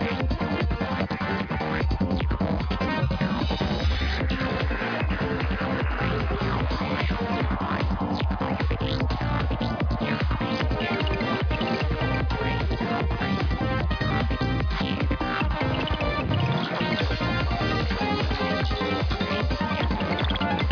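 No technical faults can be heard anywhere in the recording. There is nothing in the sound that needs a time mark or an explanation.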